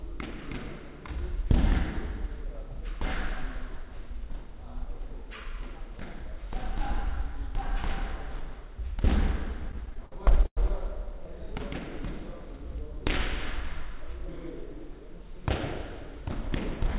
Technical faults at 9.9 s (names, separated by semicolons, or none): repeated stalls (stutter)